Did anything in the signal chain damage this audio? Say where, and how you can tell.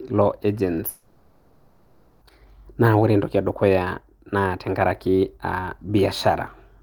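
Yes. From 0.89 to 2.23 s the speech smears into a fading buzz, then resumes with 1.32 s missing: likely a long network dropout, concealed by the receiver.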